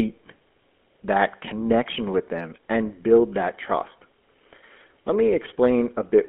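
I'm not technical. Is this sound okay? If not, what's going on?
No. The whole clip has gone through the GSM full-rate codec, an early mobile-phone speech coder. It keeps only sound between 200 Hz and 3.4 kHz, so the speech is thin and muffled, and its coarse rebuilding of the voice adds a clear buzzy, gravelly roughness from start to finish.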